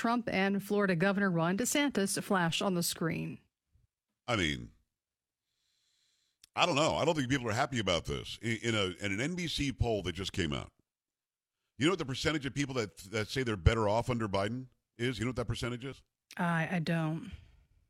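At 2.49 s, just before "on the screen", the waveform's zero line suddenly shifts by a DC step of about -42 dBFS, which a 5 Hz high-pass then bleeds away. That abrupt offset lands as a single low thump or click under unchanged speech.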